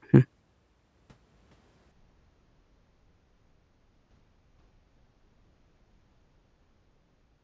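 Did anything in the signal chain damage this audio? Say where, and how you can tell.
Yes. From 1.91 s to the end at 7.43 s, a wrong sample rate at the playback stage slows the speech to a third of its speed and drops the pitch about 19 semitones together, which fits 48 kHz audio being played out at 16 kHz without conversion.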